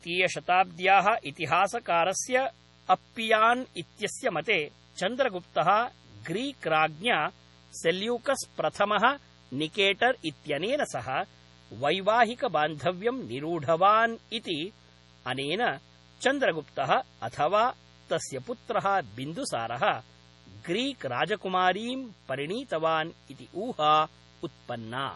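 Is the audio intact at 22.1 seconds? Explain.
No. At 22.1 seconds, as throughout the clip, a mains buzz sits under the speech: a steady, raspy tone built on 60 Hz, roughly 30 dB below the signal. Sharp switching spikes, of the kind a dimmer or rectifier produces or an unshielded cable picks up, occur twice per mains cycle. Because those edges are abrupt, they spread energy into a dense ladder of 60 Hz harmonics reaching into the kilohertz range. That is why the interference sounds gritty rather than like a smooth hum.

The same moment also shows heavy damage from what is likely MP3 compression. The band stops dead above 11.5 kHz, a fixed treble cut that fits a starved bitrate around 32 kbps. Below that cut, the encoder has discarded quieter frequency components, and they switch on and off from frame to frame. The result is a watery, swirling texture with metallic chirps on sibilants and blurred onsets on consonants.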